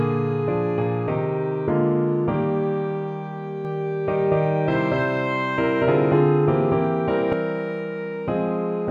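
From 3.65 to 7.33 s, a doubled audio track: an equally loud copy trails about 200 ms behind, likely from a slower second capture, showing as repeated waveform shapes with abrupt edges.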